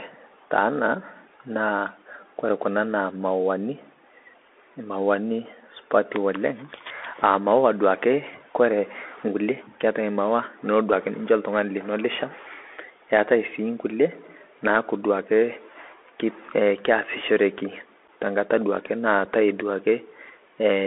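It's a speech clip running through a Bluetooth CVSD headset codec the whole way, and the damage is plainly audible. The sound is boxed into roughly 300 Hz to 3.5 kHz, s sounds come out scratchy, and a grainy hiss sits underneath, which fits a 64 kbps one-bit delta link whose step size can't keep up. There are also two spots of unconcealed Bluetooth headset packet loss, at 18.08 s and 19.25 s. The first leaves a 7.5 ms hole, about a couple of packets, and the second leaves 3.8 ms, about one packet. Each gap has hard edges, and the speech comes back a bit quieter afterwards.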